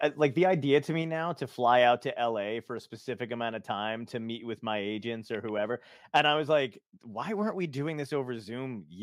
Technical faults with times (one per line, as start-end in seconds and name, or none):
6.16-6.20 microphone overload